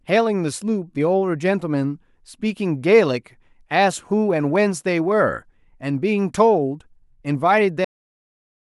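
A cut-off end at 7.85 s stops this speech recording mid-sound: the audio drops straight to digital silence with no natural decay, and that silence runs to the end of the file at 8.73 s. The final stretch of audio was never written out or played back, so the recording was truncated while sound was still present rather than closing after the speaker finished.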